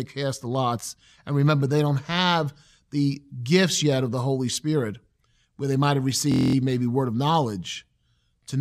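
Speech, interrupted from 6.32 to 6.55 s by a system hang loop: a 23.2 ms slice repeats ten times, producing a steady 43.1 Hz buzz, consistent with a 1024-sample buffer replaying while the system stalled. Essentially no audio is lost.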